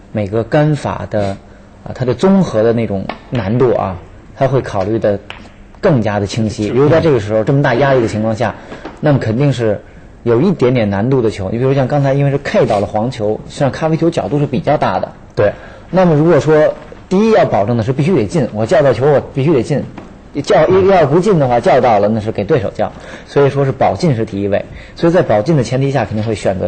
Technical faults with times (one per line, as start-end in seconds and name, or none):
none